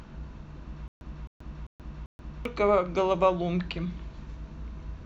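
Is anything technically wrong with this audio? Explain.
Yes. From 0.88 to 2.45 s there is a stutter with silent gaps. A 262 ms fragment repeats four times, each followed by 132 ms of dead silence. A stalled stream likely retried this way, losing the audio meant for that span.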